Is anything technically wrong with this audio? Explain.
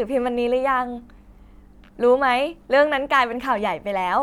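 No technical faults are audible.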